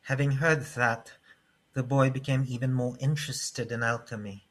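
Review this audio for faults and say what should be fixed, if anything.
No faults; nothing needs fixing.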